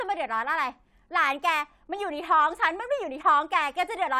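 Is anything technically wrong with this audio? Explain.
No, nothing technically wrong can be heard in this speech recording. There is no fault in it to explain.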